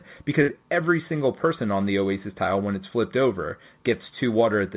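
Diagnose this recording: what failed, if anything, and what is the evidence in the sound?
The network stage failed, with a burst of packet loss from 0.42 to 0.50 s. The evidence is a short stretch where the speech stops moving forward. The last sound is held and fades for about 57 ms instead of continuing. The receiver concealed the gap by extending what it last had and lowering it. When the audio resumes, about 60 ms of speech is gone. The G.711 A-law call path leaves nothing above 4 kHz.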